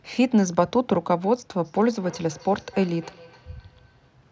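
From 1.64 s to 4.12 s, feedback echo between two devices: a second device in the room replays this microphone's signal, which gets picked up again, so the speech returns roughly every 300 ms, about 23 dB down. Unlike reverberation, the repeats come at a fixed, distinct interval rather than a smooth decay.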